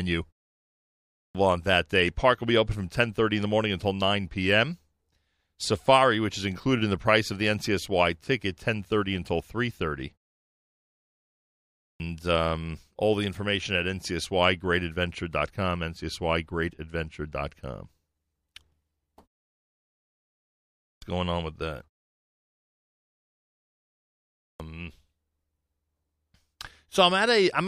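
At 0.97 s, 11.63 s, 20.66 s and 24.21 s, speech resumes with a clipped start after a pause. The output device sleeps through each silence, then wakes too slowly. Roughly 0.36 to 0.39 s of onset vanishes, so each phrase bursts in abruptly.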